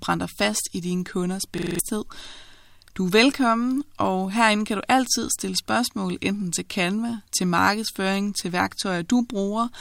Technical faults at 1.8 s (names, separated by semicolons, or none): system hang loop